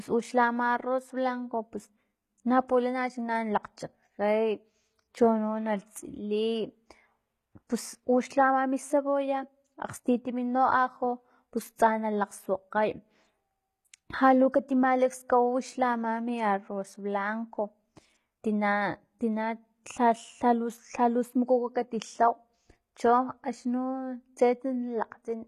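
Throughout, the treble is bright yet gritty and metallic, with lispy s sounds: likely HE-AAC compression near 20 kbps, rebuilding the top from copied lower bands.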